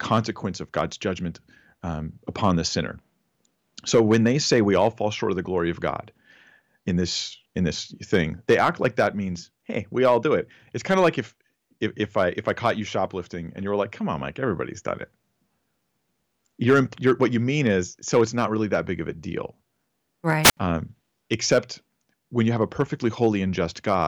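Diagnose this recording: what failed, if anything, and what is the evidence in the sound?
Hard clipping runs through the whole speech recording, likely at the input converter, with the signal driven about 12 dB past the limit. Only around half a percent of samples hit the ceiling, so loud syllables crackle with flat-topped harshness rather than the rounded squash of a limiter.

A wireless microphone squelch dropout occurs at 20.43–20.57 s, in the radio link before conversion. Hiss swells, the receiver's squelch mutes for about 71 ms, and the voice returns. That rising static distinguishes it from network packet loss, which cuts out abruptly.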